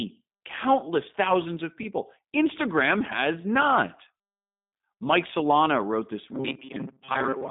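Throughout, the speech passes through the G.729 codec at 8 kbit/s: nothing above 3.8 kHz, a 150 Hz to 3.7 kHz line band, and plainly audible rough, synthetic rebuilt texture. From 6.32 s to 7.50 s, after "wrote this", the speech becomes a rigid, metallic 133 Hz buzz, robotic sound from repeated short buffers, likely from about 7.5 ms blocks replaying, roughly half the audio.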